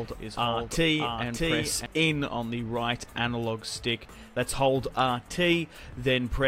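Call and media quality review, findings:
Doubled audio track, 0.00–1.86 s, already present at clip start. A full-band second copy trails by around 0.7 s, a few dB below the original, then drops out abruptly at 1.86 s. Likely a second capture path or an edit holding two offset copies. Unlike echo or reverb: no decay, no room colouring, single fixed repeat.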